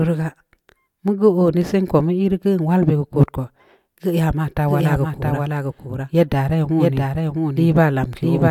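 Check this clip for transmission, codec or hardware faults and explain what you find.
One fault is present: a doubled audio track. It begins at 4.68 s, right after "ya ma ta", and runs to the end. A second copy of the speech plays alongside the first, trailing by roughly 0.7 s and sitting about 5 dB lower. The likely cause is a second capture through a slower path, or an edit holding two copies out of step. The copy cuts in abruptly. It is full-band, with no decay or room colour, so it sounds like an echoing duplicate, not reverb.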